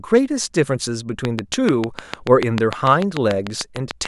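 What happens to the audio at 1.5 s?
Something is likely injecting electrical pulses into the signal path, perhaps interference from nearby equipment or a faulty connection or power supply. At 1.5 s the sound is inside a train of clicks that begins at 1.25 s and runs to 4.06 s. About twenty near-identical pulses arrive at a steady 6.77 per second, peaking roughly 15 dB above the speech. They are heard as an even ticking over the talking and in its pauses.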